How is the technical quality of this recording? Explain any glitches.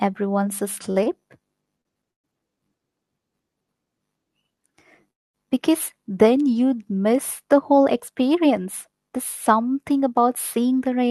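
The speech has three kinds of timing glitch from the network side of a call, heard through a codec path that is band-limited to about 12 kHz.

Short stalls from a late packet occur at 0.91–0.98 s, 1.04–1.22 s and 1.81–1.87 s. The jitter buffer ran empty, so the last sound is held for 42, 23 and 37 ms.

Call audio freezes occur at 2.11–2.26 s and at 5.11–5.36 s, just before "because then you'd miss". The sound drops to silence for about 120 ms and about 230 ms, likely because packets were held up in transit.

A jitter buffer speed-up starts at 10.57 s, after "something about", and runs to 11.03 s. Pitch-period trimming removes about 50 ms, so the speech plays at 111% speed and sounds hurried.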